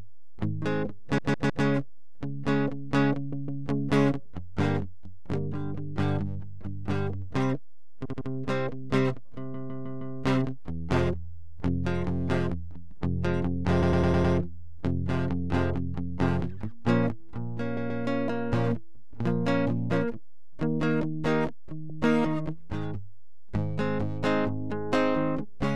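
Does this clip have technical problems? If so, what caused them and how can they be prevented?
Yes. The music stutters in eight places, each time replaying a short block. The repeated frames occur at 1.18 to 1.65 s (a 157 ms block played three extra times), 3.32 to 3.63 s (157 ms, twice), 8.05 to 8.28 s (78 ms, three times), 9.54 to 10.16 s (157 ms, four times), 13.82 to 14.34 s (105 ms, five times), 17.77 to 18.03 s (131 ms, twice), 21.89 to 22.00 s (105 ms, once) and 23.28 to 23.43 s (52 ms, three times). Every block is a multiple of about 26 ms, which fits whole MP3-style frames at 44.1 kHz being written or sent more than once. The decoder plays each copy again, so the clip grows by the repeated time. To prevent this, the stream or file writer should check frame sequence numbers or timestamps and drop duplicates before they reach the decoder.

A DC offset runs through the whole clip. 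The waveform sits shifted away from zero by a constant amount. It cannot be heard as a sound, but it eats into headroom on one side of the waveform and shows up as steady energy at the very bottom of the spectrum. The usual origin is an input stage or converter passing a fixed voltage along with the signal. To prevent this, apply a DC-blocking high-pass filter at capture or before mastering.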